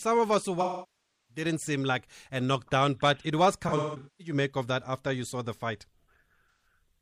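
AAC frame loss with concealment hits this speech at 0.60–1.44 s, decaying toward silence and fading back; at 3.68–4.34 s, scattered gaps (longest about 0.2 s) sounding smeared and noisy; and at 6.51–6.66 s, a brief phasey patch. The decoder is regenerating missing frames from the last good spectrum.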